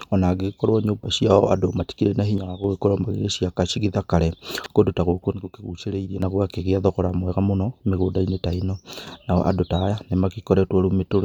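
From 2.38 to 2.64 s the speech abruptly sinks by about 6 dB, a flat-topped dip in the waveform, likely one channel drops out before the mono sum. At 4.58 to 4.66 s, chunks out of order: a 20 ms block plays three chunks late, giving a jumbled moment with three hard joins. The same drop recurs from 5.32 to 6.22 s and from 8.93 to 9.07 s.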